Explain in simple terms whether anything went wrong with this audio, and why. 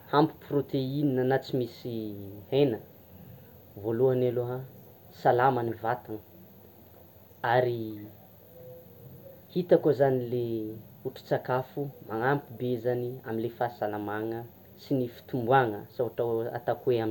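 Brief noise blips break through the speech at 5.69–5.74 s and at 11.29 s. This is DAB burbling: weak digital radio reception corrupted bits, making parts of the sound jump briefly.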